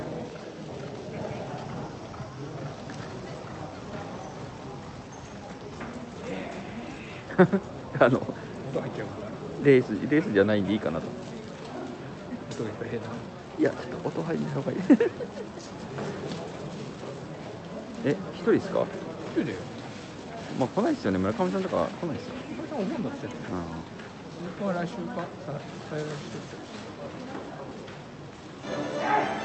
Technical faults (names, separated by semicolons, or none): none